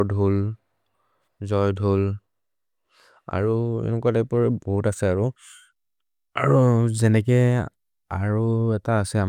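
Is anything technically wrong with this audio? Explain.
No, nothing technically wrong stood out on listening to this speech recording.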